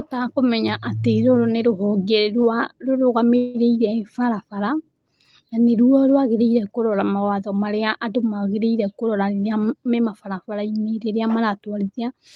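At 3.37 to 3.57 s comes a call audio freeze, likely from packets held up in transit. About 170 ms of fill, a fading buzz or hiss continuing the last sound, is inserted, and nothing is lost. On a spectrogram the final harmonics smear horizontally and decay before the speech resumes.

Right after "mawatho marĩa andũ magĩrĩire", from 9.07 to 10.29 s, a jitter buffer speed-up trims repeated pitch-period slices, around 150 ms in all. The speech runs at 113% speed with pitch unchanged and sounds hurried. The waveform shows compressed syllables with intact periodicity.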